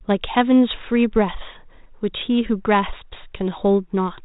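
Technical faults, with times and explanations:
No technical faults can be heard in this speech. It comes through G.726 ADPCM at 32 kbit/s, the rate DECT cordless phones use, so nothing above 4 kHz reaches the ear and the coding leaves only a light trace on the sound.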